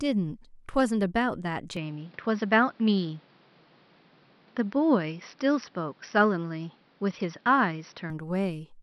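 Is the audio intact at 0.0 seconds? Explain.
Yes, the speech is intact at 0.0 seconds, with no fault audible at that moment.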